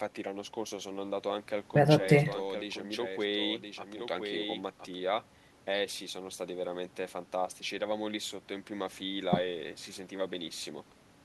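From 1.94 to 4.98 s, a doubled audio track appears. A second copy of the speech trails about a second behind, somewhat quieter. It likely comes from a slower duplicate capture path.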